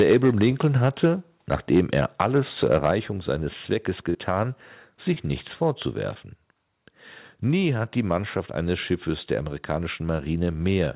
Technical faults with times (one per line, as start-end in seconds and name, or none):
0.00-1.08 microphone overload
0.13 microphone volume stepped down
1.53-2.91 microphone overload
2.91 microphone volume stepped down
4.10-4.16 short concealed packet loss
5.14-5.18 short concealed packet loss
6.14-6.17 short concealed packet loss